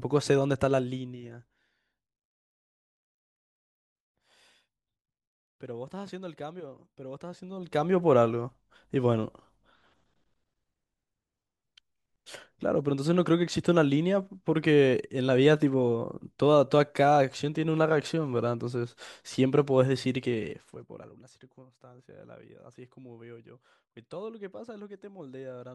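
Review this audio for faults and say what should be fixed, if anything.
Zipper noise at 0.42–1.81 s and 7.29–7.99 s: the level falls about 20 dB, then rises about 20 dB, in unsmoothed 1 dB steps, roughly twenty per second, each one clicking. To prevent it, interpolate gain changes per sample so the level moves as a continuous ramp rather than discrete jumps.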